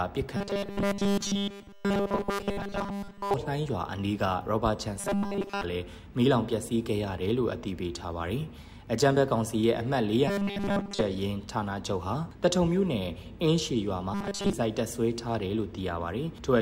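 A rigid, metallic buzz locked at 200 Hz is heard from 0.37 to 3.34 s, then returns more briefly from 5.00 to 5.64 s, 10.28 to 11.02 s and 14.14 to 14.53 s. This is robotic sound from repeated short buffers, likely caused by audio arriving too seldom and the gaps being filled by looping a 5 ms slice. Nearly everything in the first stretch is repeated, and most of each later one.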